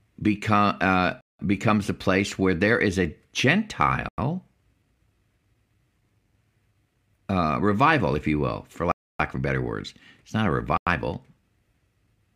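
Four times, likely because the output buffer was not filled in time, a block of digital silence was left: 1.21 s (186 ms), 4.09 s (93 ms), 8.92 s (279 ms) and 10.77 s (93 ms), lengths that fit whole 4096-sample buffers. The speech drops out abruptly and comes back with no fade.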